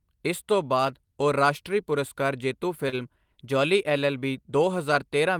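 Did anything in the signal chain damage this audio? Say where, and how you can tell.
Yes, on the network side there's a short stall from a late packet at about 2.89 to 2.96 s, right after "ਉਹ ਰਾਸ਼ਟਰੀ ਪੁਰਸਕਾਰ ਜੇਤੂ". A packet didn't show up in time and the jitter buffer ran dry, so the receiver held the last bit of speech for about 31 ms until it arrived. You hear that as a slightly drawn-out sound with a faint buzz or dip. Nothing's actually lost; everything after just runs about 31 ms later.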